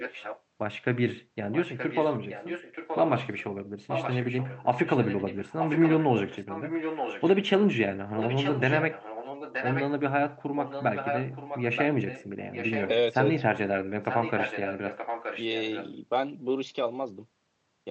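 A delayed second copy of the speech trails it by about 0.93 s, at 0.00–0.42, 1.53–3.44, 3.88–7.29, 8.16–9.90, 10.61–13.42 and 13.83–15.91 s, louder at 3.88 and 10.61 s than elsewhere. This is echo leak, likely from a loudspeaker whose canceller let the far side's voice return.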